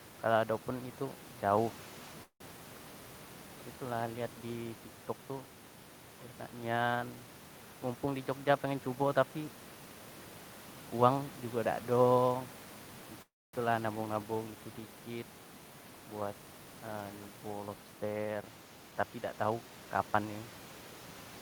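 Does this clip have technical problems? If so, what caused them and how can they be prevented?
Yes, two kinds of problem show up in this speech. First, a call audio freeze at 2.23 to 2.58 s and again at 13.22 to 13.56 s. The last sound is stretched into a fading buzz, then dies to near silence, roughly 80 ms the first time and 250 ms the second. After that the speech picks up where it left off, with nothing lost. The likely cause is delayed packets draining the jitter buffer, which puts about 169 ms and then 312 ms of extra delay into the call. A steadier network path or a slightly deeper jitter buffer would prevent this.

Second, there's jitter buffer speed-up at 8.05 to 9.37 s (112%), 16.21 to 17.10 s (112%) and 18.91 to 20.26 s (114%). The pitch stays put, but the talk sounds rushed. That's the receiver trimming tiny pitch-period slices to drain the backlog those late packets left, about 150 ms, 100 ms and 200 ms in total. 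Less bursty delivery from the network would mean less catch-up trimming.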